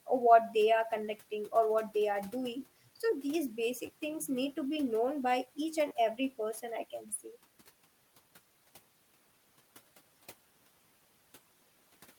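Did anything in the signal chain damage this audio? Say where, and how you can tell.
Yes. Repeated buffer at the driver or buffer stage: after "so these" (3.86 s) and "known by each and" (5.88 s), a 10.67 ms piece replays, giving brief buzzy stutters. That fits a 512-sample buffer.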